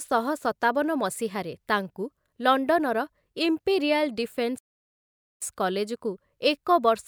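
At 4.59 s the player most likely ran short of data or had its playback thread held up, so nothing reached the output until it recovered at 5.42 s. The result is a playback stall: the speech cuts off abruptly in mid-flow and is replaced by dead silence lasting about 0.83 s, after which the audio simply resumes. The gap stands out because it interrupts the speech without any fade or warning.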